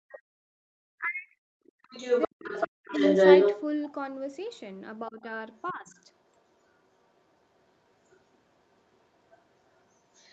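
Both sides likely talked at once, and the echo canceller, unable to separate the talker from the loudspeaker echo, turned everything down. This speech suppressed in double talk hits 0.00–0.49 s and 0.98–1.72 s, with the speech dropping by roughly 40 dB, almost to silence, for about half a second and then most of a second. From 1.82 to 3.92 s, the other side's voice is leaking through, likely because the canceller left loudspeaker sound in the microphone signal. That intruding voice sits roughly 10 dB above the talker, so it dominates. Inside that stretch, 2.27–2.93 s brings another near-silent suppression dip of roughly 40 dB. At 4.52–4.60 s, the other side's voice leaks through again as a brief, very faint scrap. Shallower suppression, roughly 10 dB, turns the speech down at 5.09–5.25 s. From 5.55 s to the end, a faint leak of the other side runs underneath the talker at about 30 dB down, and at 5.72–5.96 s the speech dips again by roughly 10 dB. 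Throughout, the audio is band-limited to 8 kHz, which fits the call processing and Opus coding at 32 kbps.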